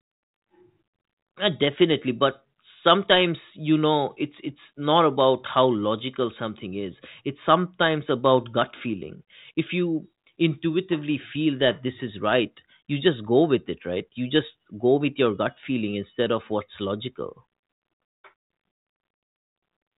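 Nothing stood out on listening to this speech; the band simply stops near 3.8 kHz, as expected of the G.726 telephone coding carrying it.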